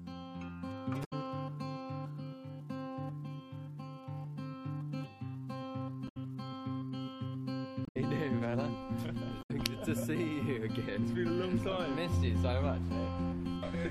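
At 1.01–1.13 s, 6.05–6.17 s, 7.83–7.97 s and 9.39–9.51 s, damaged data in the compressed stream disrupts the sound for about 0.12–0.14 s each time. The decoder cannot read the corrupted frames, loses sync and must find the next valid frame header.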